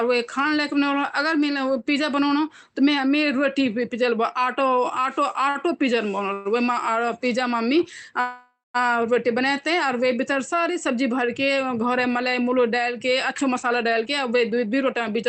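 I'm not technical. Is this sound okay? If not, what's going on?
No. The speech has three kinds of network-caused fault, all typical of audio sent over a call connection.

At 5.49 s there is a short stall from a late packet. One piece of data arrived late, so the receiver stretched the last sound for about 57 ms until it came. That sound is held slightly too long, and nothing is lost.

There are two call audio freezes, at 6.33–6.47 s and 8.20–8.76 s. The likely cause is data held up in transit. During the wait the last sound is dragged out as a fading buzz. The first lasts about 0.12 s. The second lasts over half a second and includes about 0.18 s of silence. Afterward the speech resumes where it stopped, so the freezes add gaps rather than cutting anything.

From 13.31 s to 15.23 s there is a jitter buffer speed-up. After the delays, the receiver had built up too much waiting audio. It trimmed tiny slices repeatedly, removing roughly 150 ms in total. 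The speech runs about 8% faster at the same pitch, so it can sound slightly hurried.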